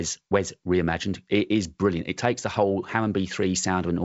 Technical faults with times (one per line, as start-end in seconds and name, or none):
none